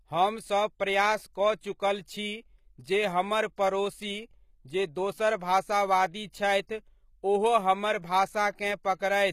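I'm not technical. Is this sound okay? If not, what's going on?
No. The speech has plainly audible damage from start to finish. The hiss-like sounds, such as s and sh, come out gritty and metallic, almost lispy. The top treble also stops completely at about 15 kHz. This is most likely HE-AAC compression. That method stores only the lower part of the sound in detail. It then fakes the treble by copying lower sounds upward. So the brightness is still there, but it isn't the real treble.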